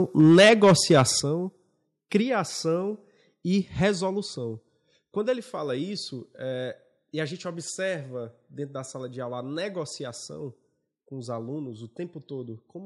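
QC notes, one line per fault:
0.19–1.02 s, microphone overload: the loudest peaks in this stretch are flattened at a fixed ceiling, adding a crackling distortion to the strongest syllables. The signal reached roughly 9 dB beyond what the converter could represent, with around a tenth of the samples cut off. The likely cause is an input gain set too high, so peaks ran into the converter's limit and lost their tops.
0.21 s, 1.2 s, 2.22 s, 4.26 s, microphone volume stepped down: voice and background drop in level together at each point, in steps of about 2 dB, 6 dB, 1 dB and 2 dB, for roughly 11 dB of reduction overall. The first step lands inside the overloaded passage. This likely reflects call software detecting an over-loud or clipping input and reducing the device's input volume one notch at a time.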